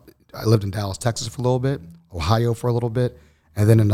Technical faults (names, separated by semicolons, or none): none